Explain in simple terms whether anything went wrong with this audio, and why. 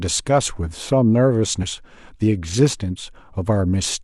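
Something did go wrong, once. At about 1.58 s the speech is interrupted by a short glitch that lasts roughly 60 ms and ends by 1.64 s. This is damaged data in a compressed stream. A small piece of the stored audio file was corrupted. When the player reached that spot, it could not read the damaged chunk properly. It lost its place and had to find the next readable section. That stumble is what you hear as the glitch.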